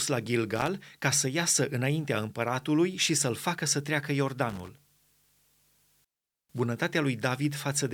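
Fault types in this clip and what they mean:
Loose connector crackle: a worn contact rapidly making and breaking, chopping the speech into irregular crackle bursts, once before "ca să iasă înaintea" and again after "facă să treacă". The waveform shows jagged dropouts and spikes; the spectrogram shows ragged broadband vertical streaks.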